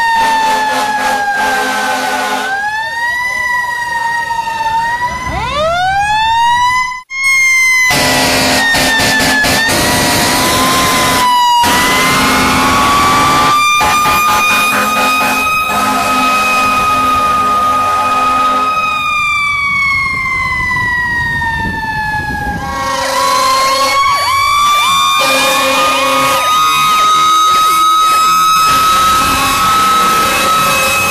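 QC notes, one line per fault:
Throughout: hard clipping. The signal is driven about 7 dB past what the chain can pass, so nearly a third of the waveform has its peaks shaved flat. Those squared-off tops add dense upper harmonics, giving a constant harsh fuzz on every loud moment rather than occasional crackle. Unlike soft saturation or a limiter, the edge is abrupt and gritty, with no rounding and no pumping in level.
6.80–7.25 s: AAC frame loss with concealment. About 0.3 s of the stream is missing, which fits a run of roughly seven lost frames. The decoder patches the hole by repeating and scrambling the last good spectrum, so the sound turns smeared and phasey, thins out as the fill decays, then returns. What sets it apart from a plain dropout is that the gap is never clean silence: it is filled with a blurred, spectrally frozen wash.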